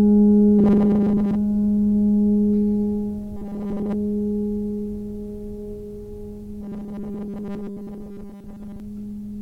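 At 0.59 to 1.36 s, again at 3.36 to 3.95 s, and for a longer stretch from 6.61 to 8.8 s, the music collapses into robotic sound from repeated short buffers: a rigid, metallic buzz pinned at 200 Hz that only loosely tracks the music underneath. That steady pitch matches a 5 ms chunk being looped over and over, likely because fresh audio wasn't arriving in time, so most of the real material in those spans gets skipped.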